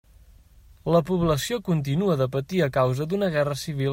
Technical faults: none

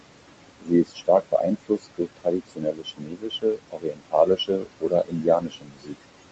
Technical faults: noise suppressor artifacts; speech cut by the noise suppressor

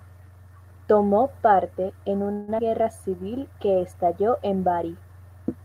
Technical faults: call audio freeze; skip ahead; jitter buffer slow-down

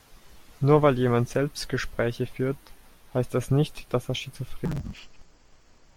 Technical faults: interleaved audio read as planar

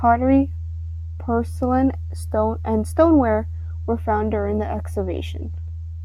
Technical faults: none

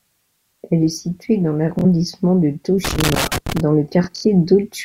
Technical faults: Bluetooth stutter; loose connector crackle

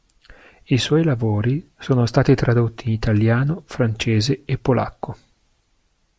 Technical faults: none

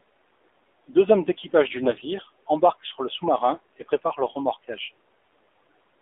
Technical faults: AMR narrowband mobile codec; AMR bit errors

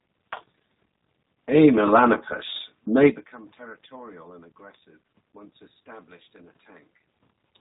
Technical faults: G.729 codec

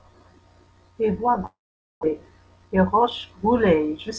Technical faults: long network dropout

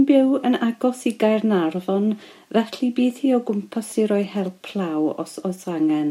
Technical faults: GSM signalling bursts

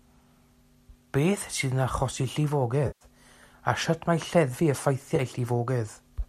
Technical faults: AAC frame loss with concealment

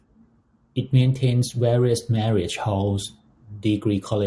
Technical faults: none

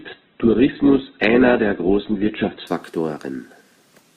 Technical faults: adaptive stream starting at a low bitrate

